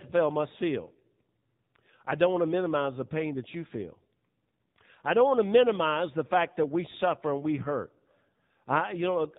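AMR narrowband mobile codec damage runs through the whole clip. The speech is band-limited, with nothing above 4 kHz, and plainly buzzy and synthetic, as the vocal-tract model rebuilds it from sparse pulses in each 5 ms, which fits AMR-NB's 7.4 kbps mode.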